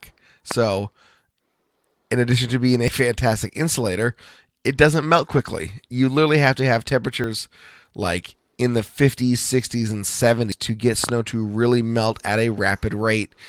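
Loud pop at 0.51 s in this speech clip: a single sharp pulse lands about 15 dB above the voice while the speech carries on underneath. At 11.04 to 11.11 s a pair of pops follows in quick succession at a similar level. These sound like a sudden voltage step riding on the signal, most likely from a plug, switch, static discharge or driver glitch. Dropped buffer (overrun) at 2.88 s, at 7.24 s just after "literally have to have", and at 10.52 s: each is an abrupt jump forward in the sound, with no silence, likely because the recording software fell behind and the hardware overwrote samples before they were read. The two sides of the missing stretch are spliced directly together. Roughly 40 ms vanishes at the first two points and around 100 ms at the third. Lost packet rebuilt from error correction from 5.17 to 5.47 s, right after "fantastic insulator it doesn't": the audio turns rougher and noisier across about 160 ms of rebuilt frames spread through that span, which points to several separately lost packets. 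Each was filled by the decoder from a low-bitrate copy carried in the following packet, so nothing drops out. A single 20 ms rebuilt frame at 8.77 s, after "like in", gives a brief grainy blip.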